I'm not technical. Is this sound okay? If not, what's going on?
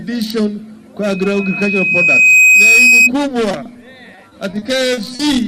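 No. There are three kinds of problem.

The first is a loudspeaker feedback squeal, from 1.02 to 3.10 seconds. A microphone is picking up the loudspeaker it feeds, and the sound loops round and round. One high tone, near 2.5 kHz, grows stronger each time. It swells over about a second and a half into a piercing whistle that sits well above the rest of the sound.

Next come two short concealed packet losses, at 3.51 to 3.55 and 3.63 to 3.67 seconds. Each time, a small piece of the audio, 20 milliseconds long, never arrived over the connection. The receiving end covered the hole by stretching out the sound just before it. You hear a tiny smear or wobble rather than a clean gap.

Finally there is repeated packet loss, heard as robotic sound, from 4.15 to 5.21 seconds. Here pieces of audio went missing again and again, about half a dozen times. The longest gap is 40 milliseconds, and about 15 percent of that stretch is patched over. 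Each hole is filled by repeating the last bit of sound. The result is choppy, with little chunks missing.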